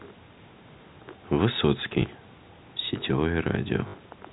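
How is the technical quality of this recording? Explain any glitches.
Two brief glitches spoil the recording, both packet loss with the last packet repeated, heard over a narrow telephone band that fits G.711 coding. Audio went missing at 2.02–2.04 s, a 20 ms gap fitting one packet, and at 3.88–3.94 s, 60 ms fitting three. The receiver replayed the last packet to fill each gap, so the longer run buzzes at 50 Hz as a short robotic stutter.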